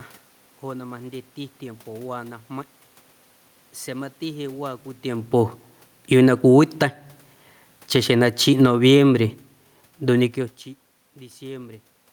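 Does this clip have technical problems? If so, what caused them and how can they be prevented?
Yes. Automatic gain falling occurs twice, from 5.97 to 6.9 s (about 5 dB down) and from 7.8 to 10.55 s (about 6 dB down). Each time the gain control judged the input too loud or its background noise too strong and pulled its gain down gradually, so the speech and the room noise behind it sink together. A talker moving, heard here around 5 s and 10 s, changes only the voice while the background stays level. Fixing the gain manually, or lengthening the control's attack time, would prevent this.

Automatic gain rising runs from 6.23 to 7.27 s, lifting the level by about 4 dB. It begins while the first fall is still under way, so the control is hunting, correcting down and then back up within about a second. Voice and room noise swell together over that second. A talker leaning closer would raise only the voice, which is what distinguishes the two. 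Disabling the automatic gain and setting a fixed input level with enough headroom would prevent this.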